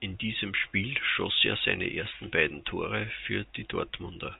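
No technical faults occur anywhere in the speech, which comes through the G.711 telephone coding as expected.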